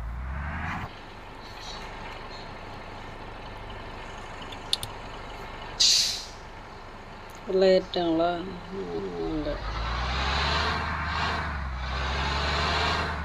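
Overlapping chunks occur at 2.74 to 2.99 s and again at 8.99 to 9.24 s, where a 250 ms stretch of the audio plays a second time, heard as a brief stutter at each join. The audio was cut into 6 s chunks, and each new chunk begins 250 ms before the previous one ended, so that slice repeats at every boundary, giving a regular stutter roughly every 6 s.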